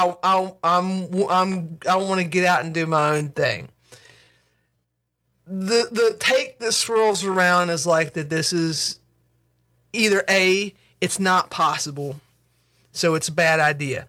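Time-stretched section from 0.0 to 9.86 s in this speech, slowed to about 0.72 times normal pace with unchanged pitch, sounding dragged until "either a it's not", likely from software repeating short pieces.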